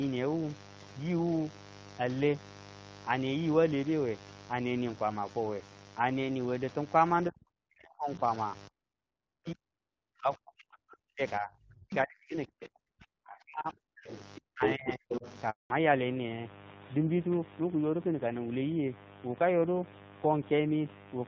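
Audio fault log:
Throughout, mains buzz: switching spikes from a 50 Hz supply get into the signal twice per cycle, spreading harmonics far up the spectrum. The result is a steady, raspy buzz sitting about 20 dB below the speech for the whole recording.
7.29 to 8.22 s, 8.68 to 11.21 s, 11.39 to 14.1 s and 14.4 to 15.24 s, speech suppressed in double talk: the echo canceller likely mistook the talker for loudspeaker echo while both sides spoke and attenuated everything. Speech dips by up to about 40 dB, fading and dropping out in pieces.
14.62 to 14.91 s and 15.09 to 15.37 s, other side's voice leaking through: the echo canceller likely failed to remove the far end's loudspeaker playback from the microphone. A second voice appears in short scraps, first at about the talker's own level, then about 5 dB lower.
15.50 to 15.70 s, handover gap: the call switched networks and no speech frames arrived during the changeover. 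The sound collapses within a few tens of milliseconds and stays silent for 200 ms until the new link picks up.
15.70 s to the end, fallback to narrowband: after the handover the call dropped from AMR-WB at 12.65 kbit/s to AMR-NB at 7.4 kbit/s. Nothing above 4 kHz survives, so the speech turns noticeably duller and rougher than in the wideband stretch before it.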